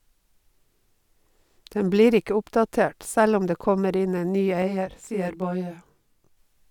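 Channel delay (comb filtering) runs from 4.62 s to 6.37 s, just after "kommer inn en ny". One channel arrives around 20 ms behind the other, and when the two are folded to mono, the shared speech cancels at a row of evenly spaced frequencies, starting near 20 Hz and repeating up the spectrum. The result is a rough, slightly doubled tone with fixed notches that persist until the section ends.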